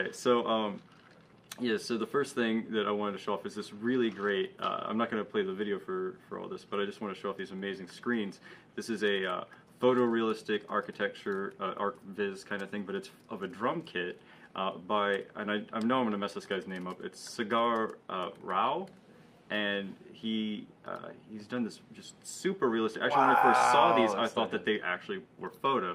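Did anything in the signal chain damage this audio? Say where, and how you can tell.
No, nothing in the signal chain stood out as damaging this audio when I listened to it.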